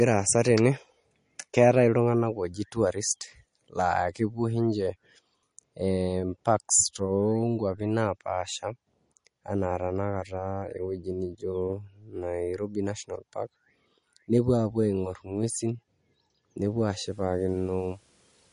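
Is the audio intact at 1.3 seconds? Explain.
No. At 1.3 seconds, as throughout the speech, the sound shows plainly audible damage of the kind MP3 compression produces, likely from encoding at a low bitrate, consistent with about 40 kbps. With too few bits, weak frequency components are dropped and then return from frame to frame, giving a watery, swirling quality. On a spectrogram, energy stops at a flat ceiling near 10.6 kHz, and below it the weaker detail breaks into flickering patches.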